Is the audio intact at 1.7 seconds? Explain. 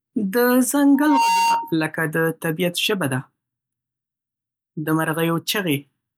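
No. From 0.94 to 1.75 s there is loudspeaker feedback squeal: a microphone is picking up its own loudspeaker, and at 924 Hz the loop gain exceeds one. That tone swells over about a third of a second into a steady squeal roughly as loud as the speech.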